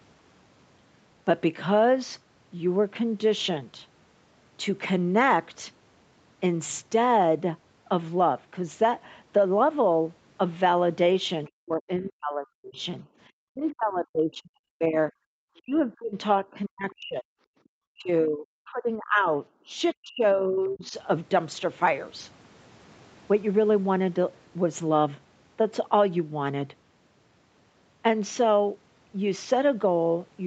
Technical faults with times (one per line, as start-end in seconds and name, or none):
11.47-13.04 speech suppressed in double talk
13.07-13.18 background gated by the echo canceller
13.50-15.11 speech suppressed in double talk
15.45-17.28 speech suppressed in double talk
17.92-19.29 speech suppressed in double talk
19.67-20.93 speech suppressed in double talk